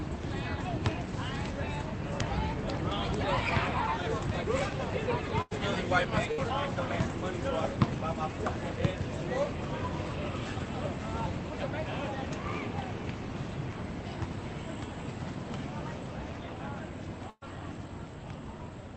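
Bursts of packet loss hit at 5.41 s, 6.32 s and 17.30 s, with about 100, 60 and 120 ms of sound missing. Each gap is bridged by the last sound stretched into a fading buzz or hiss, the third ending in brief silence. Unlike a plain dropout, the audio then resumes further along.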